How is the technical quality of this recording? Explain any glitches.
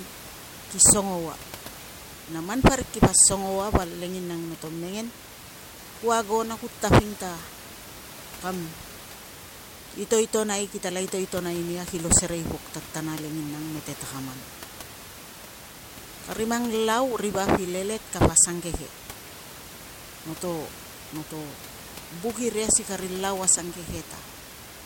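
The technical quality of this recording holds up, with no glitches to explain.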